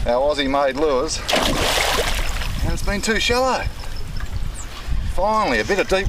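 No technical faults can be heard anywhere in the audio.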